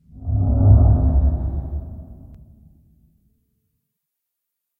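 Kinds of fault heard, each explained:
Doubled audio track: The sound was likely picked up a second time along a slower path, so two copies were mixed together out of step. From 0.39 to 2.35 s, a full-band copy trails the original by roughly a fifth of a second at about 5 dB quieter, giving a flat, exact repeat with no decay or room colour, and it cuts in and out abruptly at those points.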